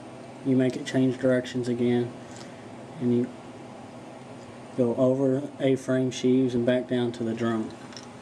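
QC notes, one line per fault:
6.57–6.59 s, loud pop: a single abrupt voltage step or pulse, likely from a plug, switch, static discharge or driver glitch, entered the signal path and was shaped by the downstream circuitry into a brief transient. It lands as one sharp pop lasting about 20 ms, peaking roughly 5 dB above the surrounding level. The sound beneath carries on uninterrupted, since the pulse is added on top rather than replacing anything.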